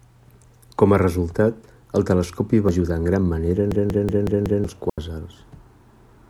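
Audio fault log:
2.69 s: compressed frames skipped. About one frame of coded speech, some 100 ms, never decoded, so the audio jumps ahead.
3.72–4.64 s: system hang loop. The system froze while the hardware replayed a 185.76 ms buffer, likely 8192 samples, five times, giving a machine-gun stutter at 5.38 Hz.
4.90 s: digital wireless dropout. The wireless link lost too much data and the receiver muted for 83 ms, leaving a clean hole of near silence without noise bursts.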